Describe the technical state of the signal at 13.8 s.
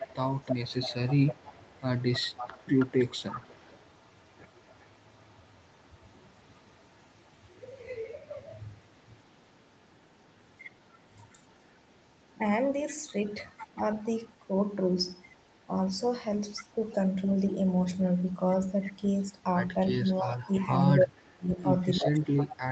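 At 13.8 s the speech carries a faint echo leak, running from 13.25 to 15.66 s. A delayed copy of the talker trails the direct sound by about 319 ms, sitting roughly 35 dB down, so it reads as a faint, ghostly shadow rather than a clear repeat. The likely cause is a loudspeaker on one end whose echo canceller let some of its microphone pickup through. On a spectrogram it shows as weak, smeared duplicates of the speech harmonics offset about a third of a second later. In the waveform it barely lifts the low-level floor between syllables.

Right at that moment, from 13.75 to 13.8 s, there is also speech suppressed in double talk. The signal dips briefly and shallowly, by a few dB over about 50 ms, most likely because the echo canceller could not tell the local talker from the returning echo and turned both down together. In the waveform it appears as a short notch in the envelope. On the spectrogram it is a faint vertical band of reduced energy across the speech, all within the 8 kHz ceiling of the call path.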